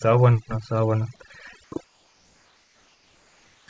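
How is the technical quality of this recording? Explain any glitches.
The recording has two audible faults, heard over a call-codec path with nothing above 8 kHz.

Overdone noise removal, throughout: an over-aggressive suppressor gates bands near its noise estimate, leaving a lowered, twinkling background.

Comfort noise in place of the background, 1.64–1.72 s and 1.84–3.68 s: likely discontinuous transmission replacing the pauses with steady synthetic noise, about 2 dB and about 4 dB quieter and featureless.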